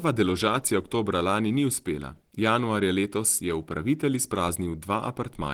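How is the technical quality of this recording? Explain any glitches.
The recording is marked by one persistent fault. Throughout, the speech was likely squeezed through low-rate Opus compression, consistent with Opus's hybrid speech mode at around 16 kbps, which rebuilds bands coarsely, so it sounds plainly muffled, hoarse and grainy.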